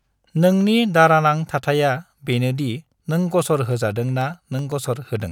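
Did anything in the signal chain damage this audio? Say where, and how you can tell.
Yes. From 3.72 s to 5.22 s the speech carries regular ticks every 0.125 s, about fifteen in all. These are periodic USB or driver dropouts: at the driver stage, something stalls the stream on a fixed cycle, and each stall leaves a sub-millisecond gap of silence.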